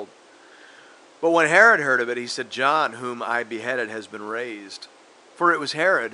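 A speech recording with no technical faults to point to. The only thing present besides the speech is the low background noise of the room, sitting about 30 dB below the voice.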